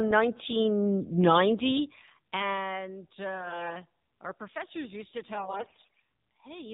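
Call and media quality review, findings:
AMR narrowband mobile codec, whole clip: speech carried over AMR-NB at a low mode; the sound fits about 7.4 kbps. Hard cut at 4 kHz. Few excitation pulses drive the vocal-tract model, so the voice is plainly buzzy, thin and synthetic.

AMR bit errors, 3.34–3.78 s and 5.34–6.00 s: weak link flipping roughly one bit in ten in the less protected frame bits while the checksum still passes. Excitation pulses misplaced, fine gain and spectrum values off. Pitch and level hold, but speech turns hoarse, scratchy and gargly.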